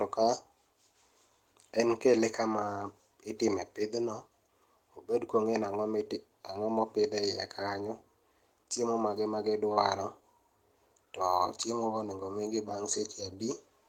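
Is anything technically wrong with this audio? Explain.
Yes. At 9.73 to 9.79 s, right after "chiemo mage", there is a short stall from a late packet: the jitter buffer ran dry, so the receiver held the last sound about 29 ms, then resumed without loss. It's audible as a brief smeared hold.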